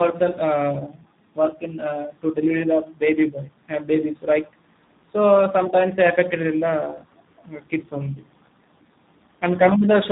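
From start to finish the speech carries tandem speech coding: it was squeezed through a G.726 24 kbit/s stage, passed across G.711, then coded again by G.729A at 8 kbit/s, so the second speech coder rebuilt an already roughened signal. The result sounds muffled, gritty and warbly. A spectrogram shows nothing above 3.8 kHz and smeared, unsteady formant bands, while the waveform looks grainy, with softened consonant onsets.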